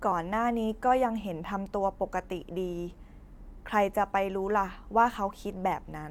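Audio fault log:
No audible faults detected.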